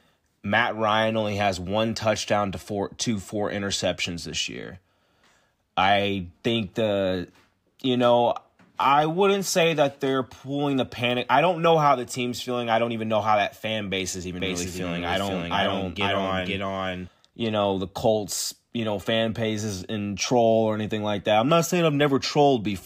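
From 14.4 to 17.08 s, after "that fan base is", there is a doubled audio track: an equally loud copy trails about half a second behind, likely from a second capture path. It is dry and starts and stops abruptly, unlike echo's decay.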